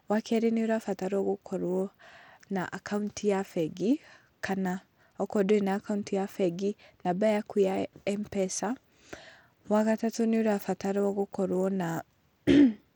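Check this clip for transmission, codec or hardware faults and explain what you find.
One fault runs through the whole speech clip: the treble flickers and drops in and out, with a gritty noise and aliasing riding on the sound. This is likely Bluetooth SBC compression, which fits a low bitrate of about 96 kbps. The coder splits the signal into a few wide bands and starves the weak upper ones of bits, quantising the rest coarsely.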